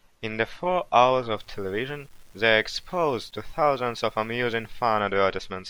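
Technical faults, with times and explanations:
1.37–5.00 s, low bit depth without dither: after "the four hours", the signal was likely rounded to roughly 9 bits without dither, so grainy distortion tracks the speech, with the error only about 35 dB below the signal.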